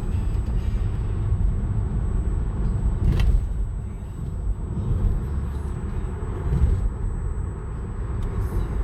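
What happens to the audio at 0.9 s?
A USB whine at 8 kHz sits under the sound at 0.9 s and runs through the whole clip. Current drawn in 125-microsecond bus microframes leaks into the audio through power or ground, giving a fixed high-pitched tone roughly 40 dB below the sound, drawn as a steady horizontal line on a spectrogram.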